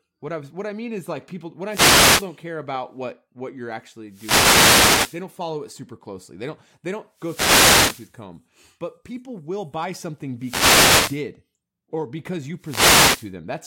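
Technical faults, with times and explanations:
1.67–2.29 s, 4.08–5.24 s, 7.13–8.17 s, 10.39–11.25 s and 12.58–13.33 s: wireless microphone noise hits, each a burst of static or swish lasting roughly 0.6 to 1.2 s that washes over the speech. The analogue FM radio link is dropping into fades where reflected signals cancel the direct one. As the signal sinks, the receiver's own noise climbs and smothers the voice until the signal recovers.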